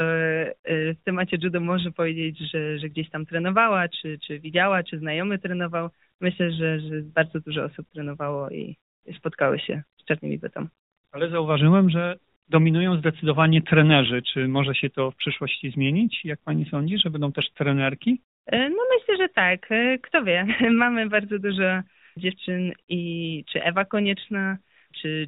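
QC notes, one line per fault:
No faults are heard in this speech clip. The AMR narrowband mobile codec path is audible as a band limit at 4 kHz with only light coding texture, which fits the 12.2 kbps mode of AMR-NB.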